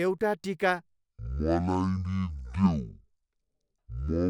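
From 0.86 s to the end of the clip, the speech drops into a section at the wrong speed. It plays at about 0.5 times its recorded rate, so everything runs roughly twice as long and sits close to ten semitones lower, deep and sluggish. The likely cause is playback or editing against the wrong clock. Pitch and tempo fall together, which sets it apart from a pure pitch shift or a time-stretch, where only one of them changes.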